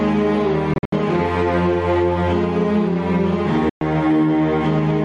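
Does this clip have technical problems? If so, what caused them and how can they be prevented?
Yes. Gain pumping runs through the whole music clip: the level swings by around 10 dB. The likely cause is input gain set far too high, with a fast limiter repeatedly pulling it down. Lowering the input gain so the limiter rarely engages prevents this.

Bluetooth dropouts cut the sound at 0.74 to 0.93 s, where about 140 ms is lost in broken pieces, the longest gap about 70 ms, and at 3.69 to 3.81 s, a hole of about 116 ms. Playback resumes as if it had continued, which fits packets likely failing to reach the headphones in time. Keeping the headphones close to the source and away from radio interference prevents this.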